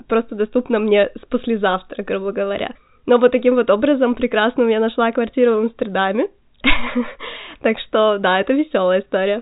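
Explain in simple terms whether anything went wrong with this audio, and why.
Nothing went wrong here.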